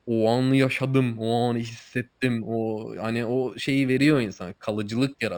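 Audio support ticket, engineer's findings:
Imaging from linear upsampling, throughout the speech. Resampler raising 12 kHz to 48 kHz by straight-line interpolation. Dulled top end, faint mirror images at 6 to 12 kHz, roughly 30 dB down, metallic shimmer on sibilants.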